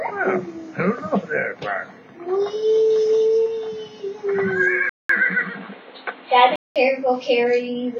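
Likely an input switched to a poorer device, from 4.89 to 6.76 s. After a 200 ms silence at the switch, the sound turns dull, with nothing above 4.3 kHz, shifts level by about 5 dB, and carries new background noise roughly 30 dB below the signal.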